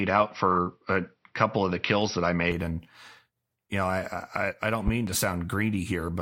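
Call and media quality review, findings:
Dull, boxy speech 0.0–2.52 s, nothing above 5.7 kHz, faint added background noise, level around 5 dB off; clears abruptly at 2.52 s with no gap. Input switched to a poorer device, likely a fallback mic or headset call profile; narrower band and own gain until the return.

Loud pop, two sharp clicks 4.88–5.11 s, roughly 15 dB above the speech, which continues underneath. Likely a voltage transient from a connector, switch, static or driver glitch, shaped into a thump by downstream circuitry.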